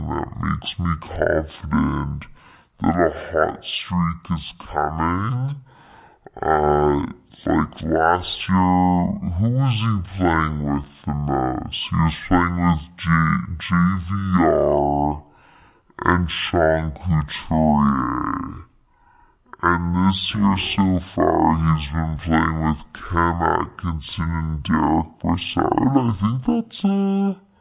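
Played back at half the rate it was recorded at, with no conversion, the speech has a wrong sample rate throughout. It runs at 0.5 speed and sits a full octave, 12 semitones, low, sounding slow and deep, which fits 16 kHz audio played at 8 kHz.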